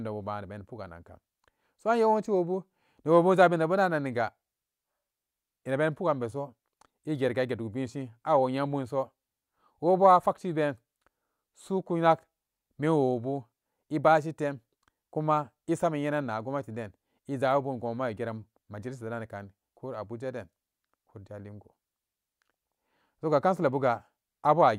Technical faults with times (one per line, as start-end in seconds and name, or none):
none